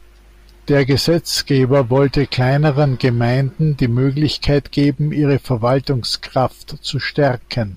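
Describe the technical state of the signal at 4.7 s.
At 4.7 s the speech signal is intact, with no audible dropout, clipping, distortion or other technical fault.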